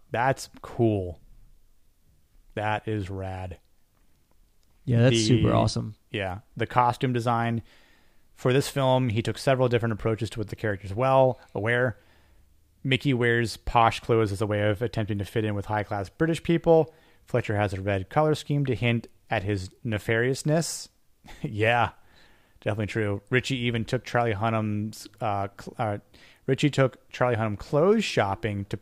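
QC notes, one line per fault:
No technical faults detected.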